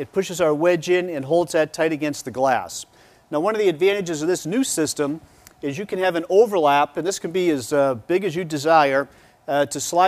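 No technical faults can be heard anywhere in this clip.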